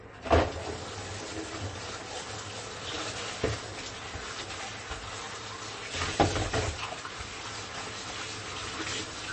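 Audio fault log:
Throughout, MP3 compression: the audio has nothing above 8.3 kHz and a plainly audible watery, swirling texture, likely from an encoder starved of bits, which fits a bitrate of around 32 kbps, cutting the treble and switching weak frequency components on and off between frames.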